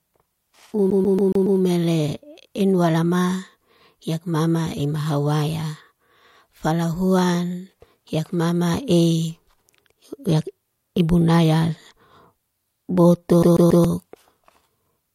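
A speech recording with a CD stuck on one turn, in two places. From 0.90 to 1.60 s, a 139 ms slice of sound plays five times in a row. From 13.43 to 13.85 s, the same-length slice repeats three times. Each jump has a brief mute. The cause is a scratch knocking the laser back one track. The same short span then replays on every rotation, giving a fast, even stutter.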